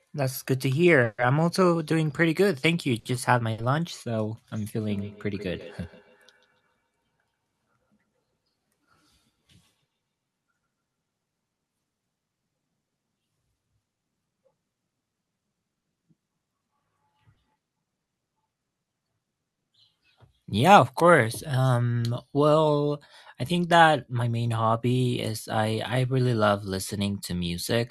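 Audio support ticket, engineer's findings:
Repeated stalls (stutter), 1.01–3.60 s. Speech drags and hiccups through five stalls totalling 280 ms, longest 140 ms, with nothing lost. Jitter buffer running dry as packets arrive late or slow; receiver extends the last sound until playback resumes.

Feedback echo between two devices, 4.80–10.66 s. Speech returns at an interval of around 150 ms, thinner and ringing, up to about 24 dB below the talker. Second device in the room replays this mic's signal; local echo canceller cannot remove it.

Jitter buffer speed-up, 9.29–9.83 s at 107% and 25.57–27.08 s at 103%. Speech runs faster at unchanged pitch, hurried in the first, roughly 50 ms trimmed each time. Overfilled buffer shedding pitch-period slices to cut latency.

Scattered short gaps, 15.79–19.66 s. About seven brief ticks and smears, each roughly 20 ms at most, 120 ms missing overall. Isolated lost or late packets, each patched by extending the preceding sound.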